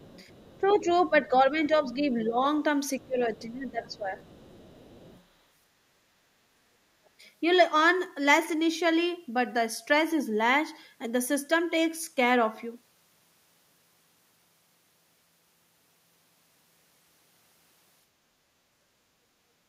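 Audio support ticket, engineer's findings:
Other side's voice leaking through at 0.00–1.01, 3.03–3.47, 3.86–5.24 and 7.05–7.09 s. Faint, roughly 25 to 40 dB under the talker. Likely residual loudspeaker echo the echo canceller missed.

Speech suppressed in double talk at 0.58–2.38 and 2.99–4.18 s. Talker dips about 10 and 15 dB, roughly a second each. Likely canceller ducking both sides during overlap.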